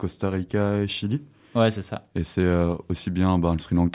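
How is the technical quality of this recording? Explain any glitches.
No glitches are audible anywhere in the speech, and there is no fault to explain.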